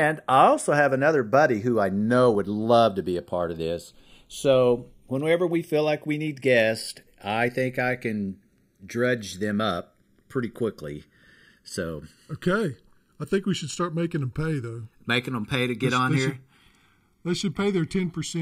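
Right through the speech you get channels drifting apart: two clocks roughly 50 ppm off let the delay creep to about a millisecond, so the mono sum flanges slowly. From 0.14 s to 18.40 s there's a steady run of clock slip clicks, ticking roughly every 40 ms, likely from single samples dropped or repeated between unsynced clocks.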